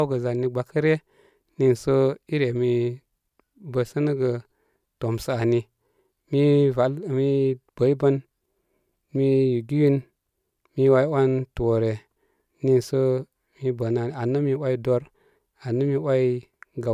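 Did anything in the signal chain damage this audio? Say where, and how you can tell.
No, nothing in the chain audibly damaged this speech.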